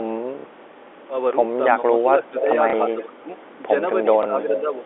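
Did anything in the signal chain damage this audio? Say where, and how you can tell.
Yes. Packet loss with the last packet repeated occurs at 0.39 to 0.45 s (60 ms), 2.70 to 2.73 s (30 ms) and 4.23 to 4.26 s (30 ms). This is network-stage damage. The receiver filled each gap by replaying the previous packet, so the longer run stutters in a robotic way and the single repeats sound like small blips. The 30 ms steps fit 30 ms packets, giving a buzz near 33 Hz in the longer run.

Speech suppressed in double talk shows up at 1.80 to 1.86 s, 2.02 to 2.49 s, 2.94 to 3.30 s and 4.03 to 4.85 s. The level dips by about 10, 15, 25 and 10 dB respectively, losing brightness or breaking into pieces. This belongs to the call-processing stage. The likely cause is an echo canceller that couldn't tell the near talker from loudspeaker echo while the far side spoke, and pulled everything down.

Echo leak appears at 1.98 to 2.02 s, 2.38 to 2.43 s, 3.01 to 3.05 s and 3.37 to 3.54 s. 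Each is a copy of the voice trailing it by 292 ms. The copy sits about 35, 10, 30 and 35 dB below the speech. This is also call processing, likely a far-end loudspeaker echo that the canceller left incompletely removed, riding over the G.711 telephone band.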